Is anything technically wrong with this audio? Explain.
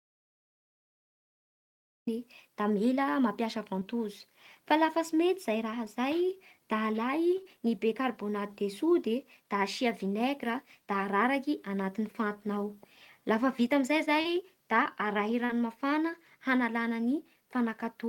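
Yes, there are two kinds of fault. The audio opens in an audio dropout to silence that is already under way and runs until 2.07 s. The gap is silent with no room tone, unlike a natural pause, which likely means the input was lost while the recorder kept writing.

Short concealed packet loss occurs at 3.79, 7.43, 14.21 and 15.45 s. About 20 ms of audio goes missing at the first two and about 40 ms at the last two. The decoder extended the preceding sound across each hole, so you hear a brief smear or wobble rather than a silent gap.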